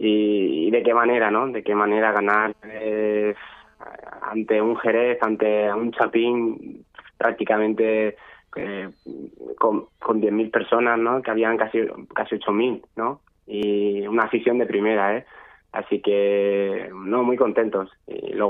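At 3.58 s, 8.60 s and 13.63 s there is a short stutter, each lasting 23 ms. These are overlapping chunks. The audio was handled in 5 s blocks. Each new block began slightly before the previous one ended. So at every join, 23.22 ms of sound plays twice. The repeat is heard as a click or hiccup. It recurs at a steady 5 s spacing.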